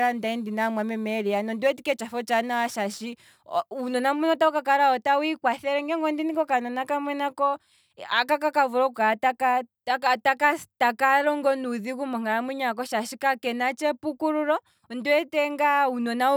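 From the start to 3.93 s, the speech goes through crude rate conversion. Samples are simply dropped to the nearest position instead of being properly filtered, and the pattern fits a change from 48 kHz to 44.1 kHz. That repeating timing error creates shifted, inharmonic copies of the speech, sitting roughly 30 dB below it, heard as a gritty, inharmonic fizz riding on louder and brighter sounds. It clears just before "mbuno otawu ka kala".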